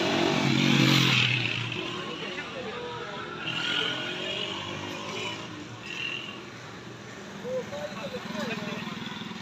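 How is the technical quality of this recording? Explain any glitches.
The opening stretch carries one fault: a time-stretched section from 0.0 to 2.4 s, sped up about 1.37 times. It was likely squeezed by dropping short pieces, so it sounds rushed, yet the pitch stays put, unlike a simple faster playback.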